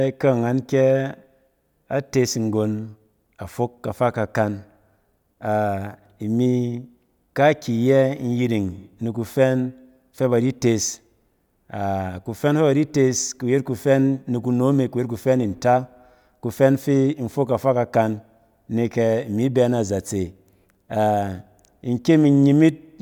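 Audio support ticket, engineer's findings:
No audible fault found in the speech clip. No symptoms to attribute to any component.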